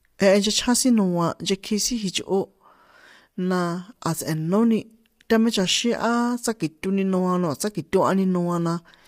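Speech, marked throughout by low-delay AAC compression: the voice sounds rough and grainy, with noise filling the gaps between harmonics and nothing above 15.6 kHz. It is likely AAC-ELD at a rate that fits about 32 kbps.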